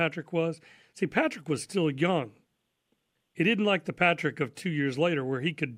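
No technical faults can be heard anywhere in this speech recording.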